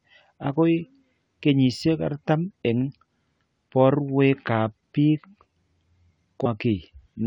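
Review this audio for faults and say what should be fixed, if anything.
Compressed frames skipped at 6.44 s: roughly 150 ms of speech vanishes as playback jumps forward, which fits about seven lost 23.2 ms frames. Re-encode from an intact source and verify file integrity before delivery.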